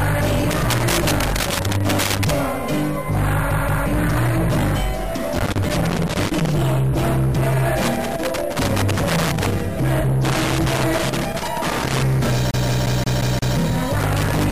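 A worn or dirty contact keeps making and breaking, so loose connector crackle chops the signal with irregular scratchy pops from 0.51 to 2.31 s. At 3.51 to 3.86 s, a CD stuck on one turn throws playback back to the same spot, repeating a 176 ms slice twice with a brief mute at each jump. The loose connector crackle returns from 5.35 to 6.49 s, 7.82 to 9.61 s and 10.25 to 12.03 s. From 12.51 to 13.57 s the CD skip repeats the same 176 ms slice six times in an even, rapid stutter. Crackle resumes at 14.00 s and runs to the end.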